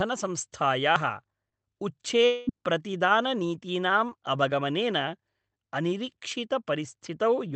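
At 0.96 s the speech jumps ahead. The likely cause is a dropped buffer (overrun) that skipped roughly 40 ms. Smaller skips of about 20 ms, each with the same likely cause, land at 4.52 and 6.32 s.

At 1.49 to 1.54 s and again at 4.09 to 4.13 s, you hear brief smears from short concealed packet loss, where about 20 ms went missing and was patched over.

Between 2.26 and 2.49 s, the sound stretches into a fading buzz for roughly 0.21 s and never falls fully silent. That's likely a long network dropout, with about 220 ms lost.

All of it sits on top of a call path with a cut-off around 8 kHz, which fits Opus.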